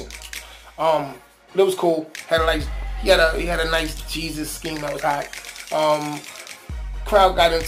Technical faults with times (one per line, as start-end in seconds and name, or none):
0.00-7.67 crude rate conversion